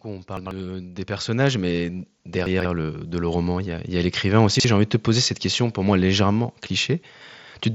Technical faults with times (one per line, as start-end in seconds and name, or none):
0.05-4.16 automatic gain rising
0.37-0.51 chunks out of order
2.46-2.65 chunks out of order
4.55-4.64 chunks out of order